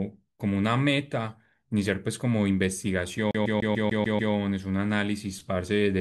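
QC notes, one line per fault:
3.31–4.34 s, CD stuck on one turn: a fast, even stutter as the same 147 ms slice of speech repeats seven times, each pass clipped by a brief mute, because a scratch keeps knocking the laser back one track at the same point every revolution.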